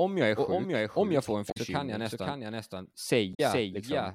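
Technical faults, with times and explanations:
throughout: doubled audio track. A second full-band copy trails about half a second behind, a few decibels quieter and without reverb, likely from a slower capture path.
1.48–1.57 s and 3.31–3.40 s: damaged data in a compressed stream. Short glitches, the first between "om jag får en" and "kan jag", where corrupted frames made the decoder lose sync.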